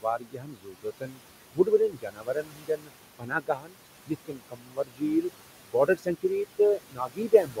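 Throughout, a noise suppressor cuts the room noise by about 21 dB band by band, leaving noise that pumps between phrases. The same suppressor mistakes parts of the speech for noise at 0.01–1.21 s, 1.53–2.91 s, 3.19–3.77 s, 4.06–5.31 s, 5.66–6.6 s and 6.76–7.6 s, dropping them by about 22 dB, so soft consonants and word endings sound swallowed. The room noise itself sits about 12 dB below the speech.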